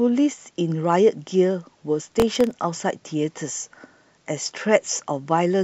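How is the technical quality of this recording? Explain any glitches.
From 2.09 to 2.51 s the speech is overlaid by a gritty burst of processor overload crackle. The processor fell behind and missed around ten of its very short buffers, each under a millisecond, repeating stale audio with hard edges until the load eased.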